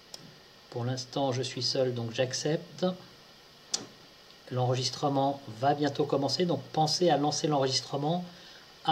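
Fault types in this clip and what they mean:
Clock slip clicks: two devices are likely running on separate, unsynchronised clocks about 200 ppm apart, so one sample is dropped or repeated whenever the drift reaches a whole sample. This gives faint, regular ticks roughly ten per second from 0.12 s to 8.86 s.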